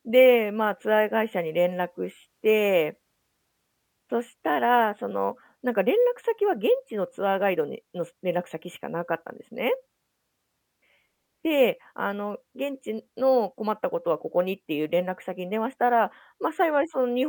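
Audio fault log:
Nothing stood out on listening to the speech in this recording.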